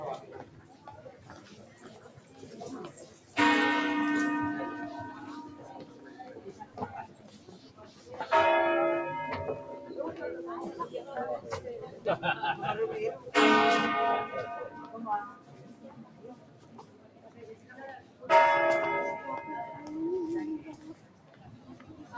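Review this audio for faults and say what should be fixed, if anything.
A speech-tuned noise suppressor was left running on this audio, treating steady sound and decaying tails as noise, so the level pumps and thins, with swings of around 15 dB.

Sound cut by the noise suppressor: sustained passages sink at 0.45–2.41 s, 3.06–3.36 s, 5.55–8.08 s, 15.31–18.24 s and 20.76–22.07 s, dropping by about 8 to 9 dB while sharper onsets survive.

To prevent this, disable the noise suppressor, or switch to a music or original-sound mode, whenever the source is not speech.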